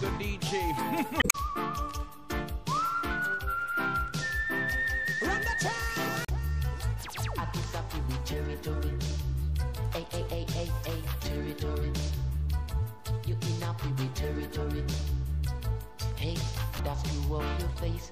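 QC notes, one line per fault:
1.19–1.35 s: damaged data in a compressed stream. A brief glitch cuts into the audio where the decoder meets corrupted bytes, misreads the frames, loses sync and hunts for the next valid frame header.
6.22–6.30 s: damaged data in a compressed stream. A shorter glitch of about 75 ms, from the same loss of frame sync.
16.75–16.80 s: damaged data in a compressed stream. A 44 ms blip as the decoder briefly loses sync again.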